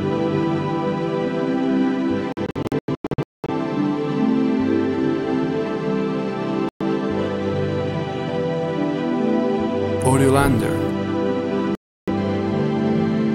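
The sound cuts out between 2.32 and 3.50 s. The gaps come in bursts, about 0.7 s lost in total, the longest single hole about 0.21 s. Another gap falls at 6.69 to 6.82 s, and a third at 11.75 to 12.09 s. Each hole has abrupt edges or a fade of a few milliseconds. The sound returns further along, as if it kept playing. This is likely a Bluetooth dropout, with packets arriving too late and being discarded.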